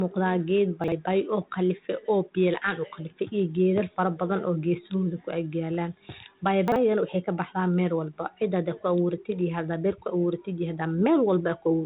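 A brief jumbled stutter hits at 0.84–0.92 s and again at 6.68–6.76 s. These are chunks out of order: in each, a 40 ms chunk of audio arrived one chunk late and played after its successor, leaving hard joins. All of this sits inside a band that stops near 3.9 kHz, consistent with G.726 ADPCM telephone coding.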